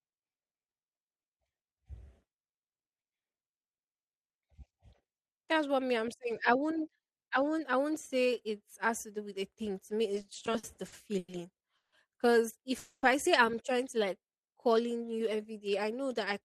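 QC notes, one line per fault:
10.15–11.30 s, repeated stalls (stutter): the speech keeps catching and dragging through this stretch, with ten short hitches, the longest about 100 ms. The receiver bridged 270 ms in total, roughly a quarter of that span, by stretching out whatever sound had just played. Packets were turning up late or slower than playback, so the jitter buffer kept running dry. Nothing actually drops out, but the flow gets choppy and sluggish.
11.76–11.94 s and 12.79–13.05 s, call audio freeze: two brief halts in the speech. In the first, the last sound is held and fades for 160 ms, the final 80 ms of it silent. In the second, 240 ms are bridged with 40 ms of silence, and speech resumes on "I say I'm trying". The likely cause is packets stuck in transit leaving the buffer empty. Each gap pushes everything after it later by its own length, and nothing is skipped.
14.09–15.43 s, jitter buffer slow-down: right after "say I'm trying to", the speech drags at about 87% of normal speed until "day I know that", adding 176 ms. 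The pitch stays put because the receiver is repeating individual pitch cycles and bits of pause to rebuild its reserve, not resampling. That's why the sounds come out drawn-out rather than lower.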